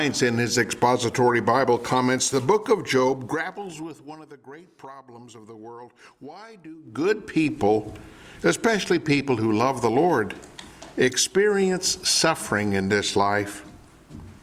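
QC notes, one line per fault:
2.95–4.26 s and 6.77–7.12 s, zipper noise: gain jumped in unsmoothed 2 dB steps, dropping roughly 20 dB at around ten steps a second, then restoring it at around forty a second. Each jump clicks, heard as ticking, then a fast zipping burr.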